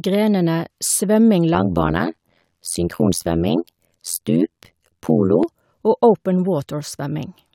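From 1.54 to 5.43 s, after "grenene svømming", overlap-add ripple: frames rejoined with mismatched overlap dip about 60 dB around 100 times a second, a frame-locked metallic buzz with extra tones around the voice rather than a steady hum.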